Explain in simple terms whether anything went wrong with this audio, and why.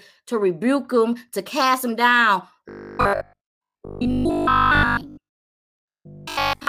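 From 2.69 s to 6.67 s the speech turns into robotic sound from repeated short buffers: a rigid, metallic 50 Hz buzz. It is likely caused by late-arriving audio, with each 20 ms chunk replayed most of the time. Unlike simple dropouts or stutters, the buzz stays on one steady pitch.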